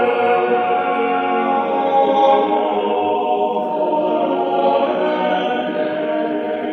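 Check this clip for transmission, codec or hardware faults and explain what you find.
One fault is present: a time-stretched section from 1.97 s to the end of the music. Software likely compressed this stretch to fit a shorter length, playing it about 1.65 times faster while dropping short slices to hold the pitch. The pace jumps abruptly, and the music turns rushed at unchanged pitch.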